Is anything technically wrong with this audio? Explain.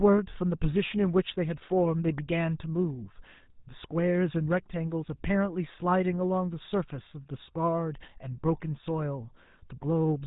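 Yes. Throughout the clip, the speech has gone through the GSM full-rate codec, consistent with a 13 kbps mobile link. It rebuilds the voice from a vocal-tract model driven by sparse regular pulses and drops everything above 4 kHz, giving a plainly audible buzzy, gravelly roughness and a dull top end.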